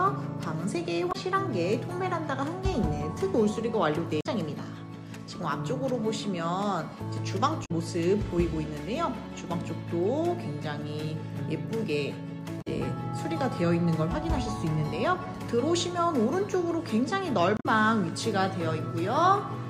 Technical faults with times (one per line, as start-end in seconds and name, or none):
1.09-1.16 damaged data in a compressed stream
4.19-4.26 damaged data in a compressed stream
7.62-7.71 damaged data in a compressed stream
12.58-12.67 damaged data in a compressed stream
17.54-17.66 damaged data in a compressed stream